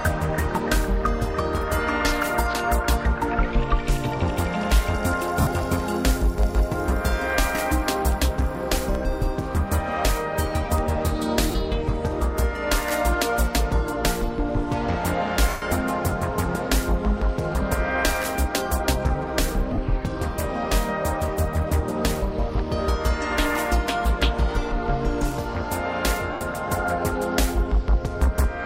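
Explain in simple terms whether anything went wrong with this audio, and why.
Lost LE Audio frames cause brief gaps at 5.41, 11.51, 15.49, 19.73 and 26.33 s, lasting 30 to 130 ms. The decoder fills each gap with a noisy smear of the last sound, not a clean silent dropout. In the longest, at 15.49 s, the smear fades away.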